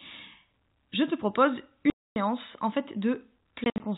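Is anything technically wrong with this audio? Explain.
Yes, there's packet loss filled with silence, over an otherwise narrowband telephone-style G.711 path. From 1.9 to 2.16 s, between "je te propose" and "en fait", the speech drops to dead silence with hard edges. That gap fits 20 ms packets going missing in a row. Then between 3.64 and 3.8 s, short holes chop the sound, at most 60 ms each.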